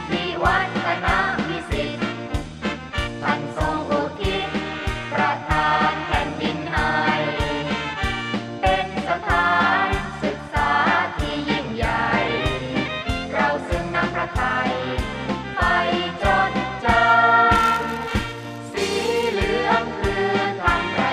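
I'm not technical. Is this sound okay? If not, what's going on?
No. From 17.55 to 19.35 s there is a buzz at about 172 Hz that rises and falls with the sound's level. This is a filter restarted on every block: it loses its memory at each 256-sample chunk and starts each chunk with a tiny click, and the clicks merge into the buzz.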